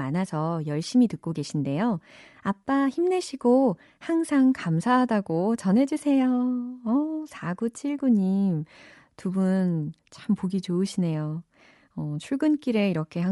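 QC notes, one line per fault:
throughout, Bluetooth LC3 compression: the speech has a plainly audible breathy, grainy haze up top, likely from the LE Audio codec replacing discarded high bands with noise fill, fitting about 48 kbps in 10 ms frames. A plain low-pass would sound dull, not hissy.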